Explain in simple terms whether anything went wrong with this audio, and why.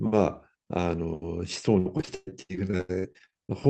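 Something goes wrong in the second half. From about 1.79 s to 3.67 s the speech turns choppy and robotic: this is repeated packet loss. Small chunks of audio keep going missing, about twenty times, and each hole is patched by stretching the sound just before it, so about a third of that stretch is filler. Unlike a single dropout, the holes come in a rapid chain, the longest only about 0.12 s, giving a choppy, broken sound rather than one clean silence.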